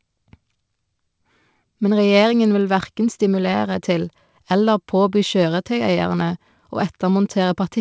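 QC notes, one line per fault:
No faults heard anywhere in this speech recording.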